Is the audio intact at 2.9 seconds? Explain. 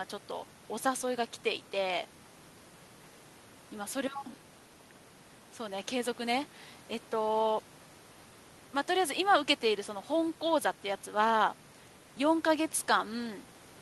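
Yes, the speech at 2.9 s is intact, having passed through the call path with only its ordinary codec coloration and the upper band ending around 12 kHz.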